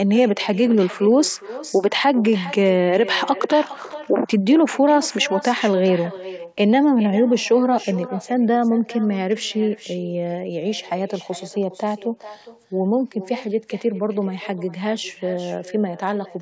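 Speech carried over a call path, with echo with no canceller running throughout. Every phrase is followed, roughly 400 ms later, by a quieter copy sitting about 16 dB below the direct speech, thinner than the original. That is the far end's loudspeaker feeding its own microphone and returning the sound across the network round trip, with no echo cancellation removing it. The G.722 coding leaves nothing above 8 kHz.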